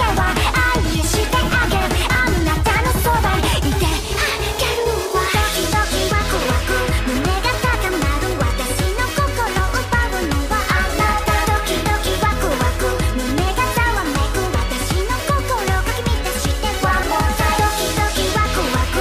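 The audio skips briefly at 2.15, 4.63, 9.59, 12.07 and 17.03 s, each time losing around 20 ms with the two sides butted together. The spacing fits 2.5-second chunks, so this is likely audio missing between chunks at block boundaries.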